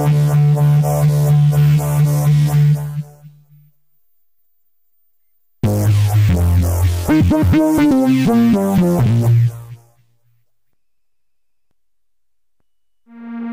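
Right at 8.83 s there's a case of compressed frames skipped. The audio hops forward by a tiny amount, around 20 ms, which points to roughly one frame going missing from the file or being thrown out by the decoder as damaged. That jump fits a frame length of about 23 ms.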